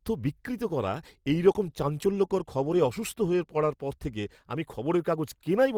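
Nothing stood out on listening to this speech clip.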